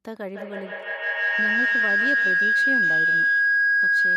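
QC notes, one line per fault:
0.33–4.16 s, feedback howl: from 0.33 s a tone near 1.5 kHz swells until it sits about 10 dB above the speech, its repeats roughly 150 ms apart, and it never breaks before the clip ends. Microphone and loudspeaker share the room, so each pass round the loop comes back louder and narrower. A spectrogram shows one bright horizontal band brightening as it builds, while the waveform envelope grows and swamps the speech.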